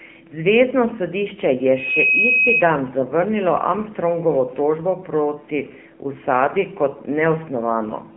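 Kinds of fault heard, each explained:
AMR narrowband mobile codec: the speech sounds thin, boxed-in and audibly buzzy and synthetic, confined to about 150 Hz to 3.5 kHz with nothing above 3.6 kHz. A 2G/3G phone codec rebuilds the voice from a vocal-tract model, and the damage fits roughly 7.4 kbps.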